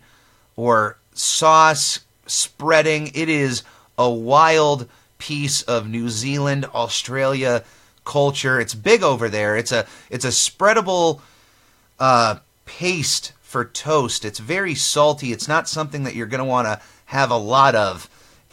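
A speech recording with no technical fault to report. There is nothing in it that needs a time or a cause attached.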